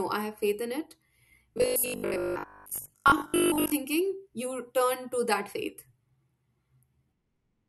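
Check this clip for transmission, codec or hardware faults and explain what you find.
One fault is present: robotic sound from repeated short buffers, from 1.54 s to 3.72 s. Through that stretch the speech collapses into a rigid, metallic buzz at 50 Hz that roughly tracks the syllables. The likely cause is audio arriving too slowly, with the playback side looping the last short fragment to fill gaps while the missing audio is skipped. A 50 Hz buzz fits a repeated fragment of about 20 ms, and most of the span, around 70 percent, is repeated material rather than new audio.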